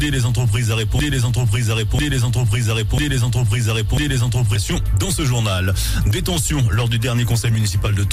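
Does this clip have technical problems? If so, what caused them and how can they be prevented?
Yes: a broken-record loop from 0.99 to 4.56 s repeats one 0.99 s fragment four times, identically and without the fading of an echo, likely from a stalled player or stream. Preventing it means keeping playback buffers filled and having the player output silence, not the old fragment, when data runs out.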